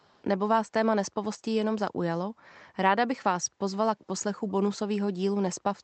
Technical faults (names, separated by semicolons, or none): echo leak